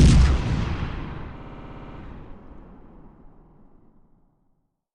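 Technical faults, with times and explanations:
1.38–1.98 s, repeated frames: a 60 ms block replays ten extra times, adding 600 ms and producing a rapid stutter.
3.45–3.55 s, repeated frames: a 50 ms block plays twice more, adding 100 ms. This causes a brief stutter.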